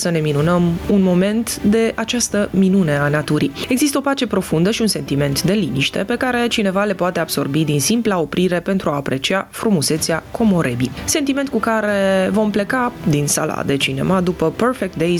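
All the way through there's gain pumping. The level gets shoved down by around 10 dB as each loud sound arrives, so the level keeps breathing. It's likely the input gain was set too hot, with a fast limiter clamping down on each peak.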